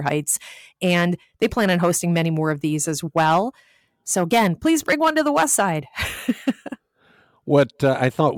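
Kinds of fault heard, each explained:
No faults can be heard anywhere in this speech recording.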